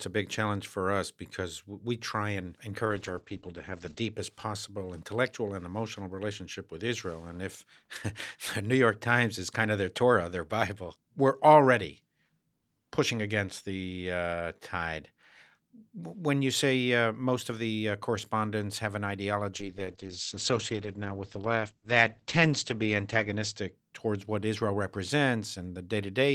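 From 2.86 to 4.19 s the speech turns muffled and rough, losing its top end, and the same dull, watery quality returns for longer between 19.56 and 23.79 s. Both are call bitrate drops: the encoder was starved of bits, which fits a fall from 48 kbps to around 10–11 kbps, so it coded more coarsely and cut the bandwidth from 20 kHz to 8 kHz. The worst stretch lasts about 1.1 s the first time and 4 s the second.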